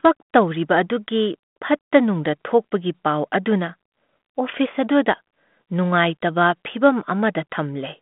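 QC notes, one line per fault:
No faults are present in the speech. The audio sits in a narrow telephone band of roughly 200 Hz to 3.5 kHz with only a light ADPCM graininess, which fits G.726 running at 32 kbit/s.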